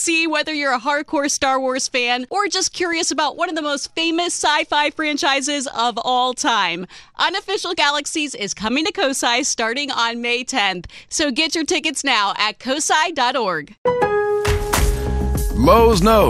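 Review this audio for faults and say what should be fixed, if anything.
Likely MP2 compression: at a rate that fits about 80 kbps, the encoder runs short of bits for its 32 sub-bands, so the upper bands are switched off and the remaining ones are coarsely quantised. Throughout the clip, the sound is plainly dull, with a granular, gurgling texture and a flickering top end. Encoding at a higher bitrate, or with a more efficient codec, would prevent this.

DAB burbling at 2.93 s: a short burst of bit errors, only a small fraction of a percent, slipped past the error correction into the audio data. The damage sounds like a couple of frames' worth of corrupted samples. Single sub-bands get short blips of noise, producing a few watery blips over the sound. Better reception, through a stronger signal or a better-placed antenna, or a higher error-protection level on the service, would prevent it.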